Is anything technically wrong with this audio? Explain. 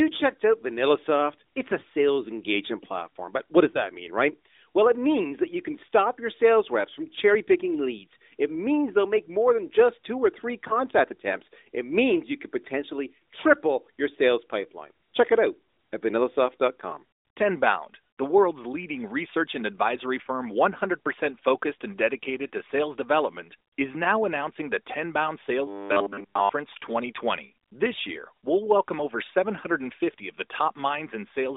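Yes, there are two kinds of fault in this narrowband mobile speech, whose band runs from about 250 Hz to 3.7 kHz.

Lost AMR speech frames occur at 3.72 to 3.82 s, between "platform but what does" and "mean right"; at 10.68 to 10.77 s, after "just two or three"; and at 22.48 to 22.51 s, between "focused and" and "to sales development is." Each time one 20 ms frame failed, and the decoder filled it by reusing the previous pitch and vocal tract settings at reduced gain. You hear a short dip or warble. On a waveform it shows as a brief drop in amplitude, and a spectrogram shows the harmonics smearing for a moment.

Robotic sound from repeated short buffers runs from 25.67 to 26.49 s. It is likely caused by late-arriving audio being covered by a repeated 10 ms buffer, which fits the fixed 100 Hz buzz, with most of the stretch made of repeats. A spectrogram shows rigid, evenly spaced 100 Hz harmonic lines, and the waveform shows identical short cycles.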